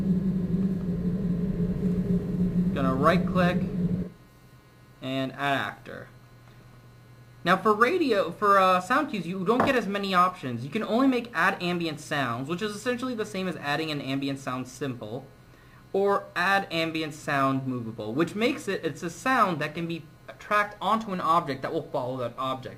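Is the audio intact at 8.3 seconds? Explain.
Yes, the audio at 8.3 seconds is intact, with no dropout, click, distortion or other fault to be heard at that moment.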